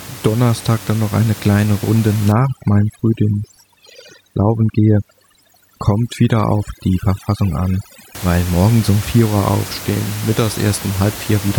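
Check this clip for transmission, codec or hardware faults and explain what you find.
One fault stands out: overdone noise removal, running from 2.32 s to 8.15 s and ending just before "weil morgens um vier". Over that stretch a noise reducer set far too hard is clamping down on any frequency band that sits near its noise estimate, and the quieter parts of the speech get dragged under with the room noise, which is only about 15 dB below the talker. What you hear is a background that drops and breaks up into little twinkling specks.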